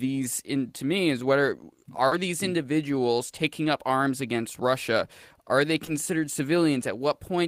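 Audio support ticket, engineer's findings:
Short concealed packet loss at 2.07–2.13 s (after "to me is whether", before "these individuals taking up") and 5.85–5.89 s. Receiver jitter buffer or decoder concealment extended the last sound over roughly 40 ms and 20 ms of missing audio. Brief smear. Spectrogram shows harmonics stretched flat, then a blend back.

Lost packet rebuilt from error correction at 2.11–2.13 s and 5.87–5.89 s, one 20 ms packet each, closing both losses. The Opus decoder played the low-bitrate in-band FEC copy, so there is no gap, but the frame is rougher and noisier. Spectrogram shows a short grainy patch with less defined harmonics.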